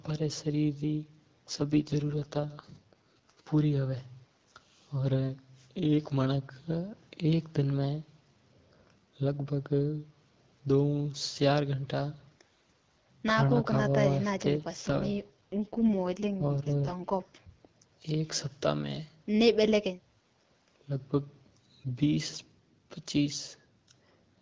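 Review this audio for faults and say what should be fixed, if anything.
From 1.49 to 3.48 s and again from 14.81 to 17.50 s the speech turns rough, raspy and synthetic, with no gap and no loss of bandwidth, then clears. This is an AMR rate drop: on a weak radio link the network switched the AMR-WB codec from 12.65 down to 6.6 kbit/s, its lowest mode, spending the freed bits on error protection. A stronger radio link during the call would prevent these drops.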